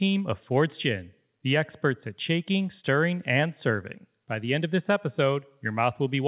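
No technical faults can be heard anywhere in this recording.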